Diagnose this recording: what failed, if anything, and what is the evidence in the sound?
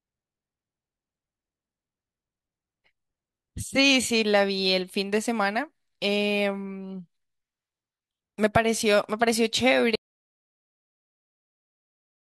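An audio dropout to silence cuts the speech off at 9.96 s and lasts to the end: silence, with no room tone or noise floor. The waveform goes flat and the spectrogram turns blank. The likely cause is a lost input link or device, with the recorder still writing samples.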